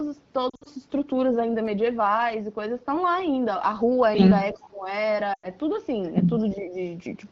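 Lost AMR speech frames at 0.49 to 0.68 s: corrupted radio frames made the decoder repeat its last good speech parameters at falling level. About 120 ms went missing in gaps scattered over 160 ms, the longest 60 ms, so the speech warbles and briefly thins out.

Echo leak at 4.52 to 4.60 s: a faint copy of the speech returns about 360 ms late, likely because a far-end loudspeaker echo slipped past an echo canceller.

Speech suppressed in double talk at 4.54 to 4.88 s: with both sides talking, the talker drops sharply, by roughly 20 dB, for around 300 ms, likely because the echo canceller turned everything down.

Lost AMR speech frames again at 5.34 to 5.47 s: 100 ms of frames are concealed, so the sound drops to near silence within two frames before recovering weakly.

Speech suppressed in double talk at 6.54 to 6.76 s: a shallow dip of roughly 5 dB lasts about 200 ms, likely the same echo-control attenuation during overlapping talk.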